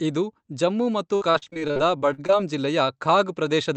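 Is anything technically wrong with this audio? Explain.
Yes, there's a stretch of repeated packet loss (robotic sound) from about 1.15 to 2.32 s, right after "ಇದು ಜಮ್ಮು ಮತ್ತು". Packets kept going missing, and each hole got patched by stretching the last bit of sound. The dropouts come in a quick run of short gaps, the longest about 58 ms, and roughly a third of that stretch is concealed. You hear it as choppy speech with bits missing, on top of the call-codec sound, which tops out around 8 kHz.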